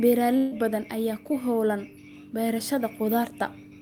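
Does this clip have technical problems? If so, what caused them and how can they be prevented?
Yes: a burst of packet loss at 0.37 to 0.53 s, before "badan ayaa", replaces about 140 ms with a fading continuation of the preceding sound, showing as smeared, decaying spectrogram bands and then an abrupt waveform jump. Forward error correction, packet redundancy and a deeper jitter buffer on the network path would prevent it.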